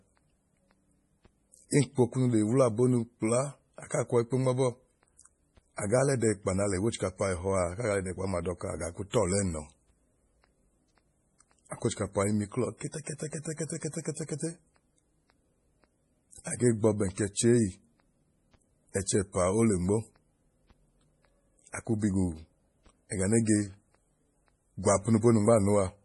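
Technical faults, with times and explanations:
Throughout, MP3 compression: a heavily bit-starved encoder, likely running near 32 kbps, removes everything above 11.3 kHz and drops weak frequency lines, leaving the speech dull, watery and swirly.
1.70 to 1.72 s and 9.10 to 9.14 s (just after "dọka agaa ku"), pre-echo: block-wide quantisation noise leaks ahead of sharp attacks, spreading a short hiss over 25 and 33 ms before each onset and softening it.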